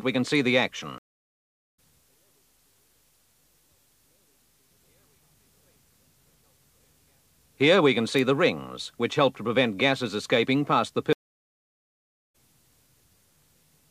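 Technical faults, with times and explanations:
0.98–1.79 s, stream reconnect: the audio cuts to silence for 0.8 s, then resumes roughly 0.4 s further along, so a stretch of material is skipped. The connection dropped and the player restarted its decoder mid-stream, picking up at the live position rather than where it stopped.
8.19 s, electrical switching spike: a sharp snap sits on top of the sound, independent of the programme material. This is likely an arc from a nearby switch, motor or static discharge coupling briefly into the audio line.
11.13–12.35 s, stream reconnect: a longer break of 1.21 s of silence, after which the audio returns around 0.7 s later than where it broke off. Again the link failed, the player reconnected, and the fresh decoder joined the stream at its current point, dropping the gap.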